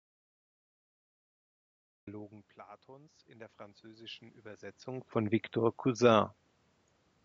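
The clip opens in an audio dropout to silence already under way, lasting until 2.07 s: silent with no room tone beneath it, which sets it apart from a quiet pause. The likely cause is input lost upstream while the recorder kept writing empty samples.

From 2.96 to 4.32 s comes automatic gain rising. After the input level fell by about 19 dB, the gain control lifted its gain by about 5 dB over more than a second. Unlike the talker's own movements near 2 s and 4.5 s, the room noise swells along with the voice.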